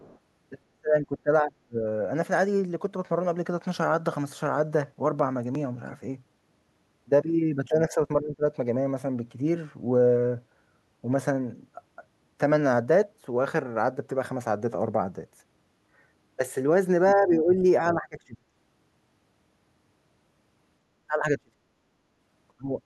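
Speech, opening with a faint second voice from 0 to 0.19 s, sitting roughly 30 dB under the talker and brief. That is the other side's voice leaking through, likely loudspeaker playback picked up by the microphone and not fully removed by the echo canceller. The talker's own voice then dips or drops out in pieces at 0.69 to 1.84 s, 7.68 to 8.0 s, 8.21 to 8.43 s, 17.14 to 17.59 s, 17.81 to 18.45 s, 21.07 to 21.58 s and 22.49 to 22.72 s. The drops range from a mild dip of around 10 dB to near-silence of some 30 to 35 dB, with the deepest cuts at the start and near 21 s. This is speech suppressed in double talk, likely the echo canceller failing to tell the talker from the far-end echo while both spoke at once and so attenuating everything.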